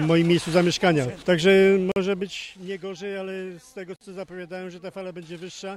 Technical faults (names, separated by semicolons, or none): gap at a join of encoded pieces